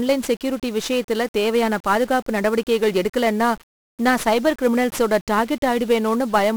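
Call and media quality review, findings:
Speech fuzzy and crackly throughout, treble buried under dense broadband hiss. 1-bit DFPWM compression, heavy damage. Encoder sends one bit per sample, only nudging an adaptive level up or down, so quantisation noise is large and spread across the band. Grain density fits a roughly 48 kbps 1-bit stream.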